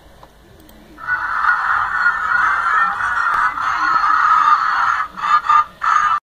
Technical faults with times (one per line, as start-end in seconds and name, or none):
0.22-4.91 clock drift buffer slips